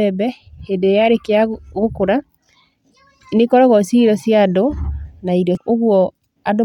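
A brief glitch cuts through the speech at 2.60 s, and a longer one follows from 5.55 to 5.58 s, just after "na irio". Both come from damaged data in a compressed stream: corrupted bytes make the decoder misread frames and lose sync until it finds the next frame header.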